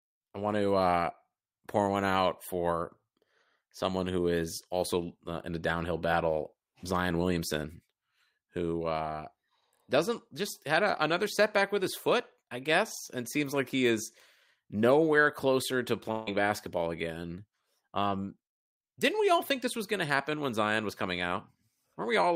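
A long network dropout runs from 16.11 to 16.29 s in this speech clip, right after "is nowhere closer to" and before "basketball again". For about 0.17 s the sound is replaced by a smeared continuation of the last fragment, a buzz or hiss that fades without ever reaching silence. The likely cause is that incoming audio stopped arriving and the receiver filled the gap by extending what it last had. About 160 ms of the original sound is lost, so speech resumes with that piece missing.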